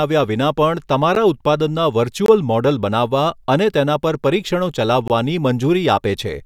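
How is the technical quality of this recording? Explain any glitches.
The recording has three dropouts. Each is a block of digital silence: at 1.15 s, from 2.26 to 2.28 s, and from 5.08 to 5.10 s. The output buffer likely went unfilled, fitting 512- and 1024-sample blocks. The speech cuts out abruptly, giving a tick or short pop.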